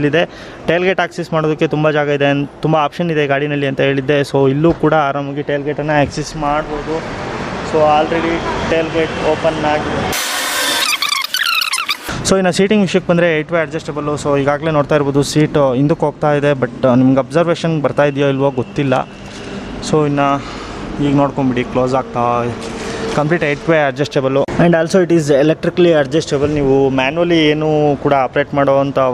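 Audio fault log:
Nothing stood out on listening to this audio.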